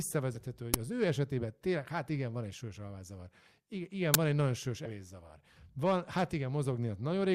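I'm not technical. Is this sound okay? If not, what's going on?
No. There are two kinds of fault in this speech.

The first is compressed frames skipped. At 0.35 to 0.38 s, and again at 4.85 to 4.88 s just after "van egy nagyon sős", the sound jumps ahead. Small chunks of the compressed audio never get played. They are missing or were rejected as damaged. The first jump loses about 50 ms and the second about 70 ms.

The second is an uninitialised buffer. At 0.74 s, right before "az ő", and at 4.14 s, right before "van egy nagyon sős", there is a very short, loud crack. The player sent out a block of memory before any real audio had been written into it, so leftover junk came out as sound. The first crack lasts about 5 ms and the second about 10 ms.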